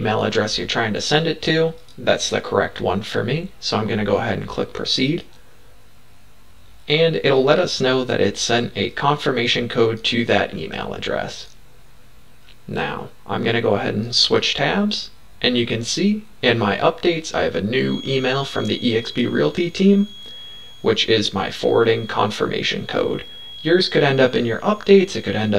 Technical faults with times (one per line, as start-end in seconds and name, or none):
0.00-25.58 channel delay (comb filtering)
17.77-25.58 feedback whistle